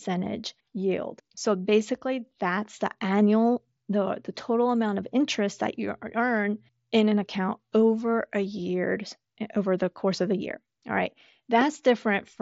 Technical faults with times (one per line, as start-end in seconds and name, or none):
11.61-11.63 loud pop